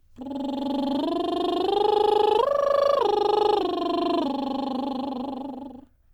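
Listening through this piece of music, nothing stood out as a technical fault at any point.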